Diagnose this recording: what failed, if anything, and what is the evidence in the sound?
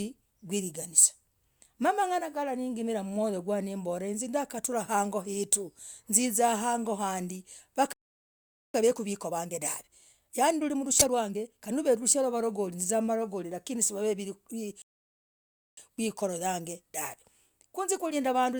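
Playback stall: the speech goes silent from 7.93 to 8.74 s and from 14.82 to 15.77 s, likely because the playback buffer ran dry.

Time-compressed catch-up: after each stall the player hurries the speech, at 1.25× from 8.74 to 11.74 s and at 1.1× from 15.77 s to the end. Pitch stays normal, unlike a resampled speed-up.

Corrupt frame decoded: at the codec stage, a burst from 10.99 to 11.06 s spans about two frames and peaks near -5 dBFS. Energy lands at wrong frequencies.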